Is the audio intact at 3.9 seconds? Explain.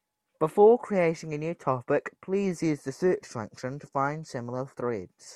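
Yes, the speech at 3.9 seconds plays through intact, with no audible fault at that moment.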